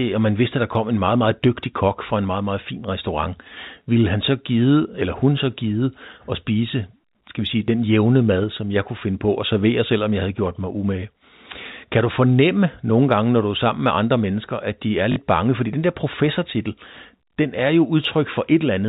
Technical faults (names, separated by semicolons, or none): packet loss with last packet repeated; sudden gain jump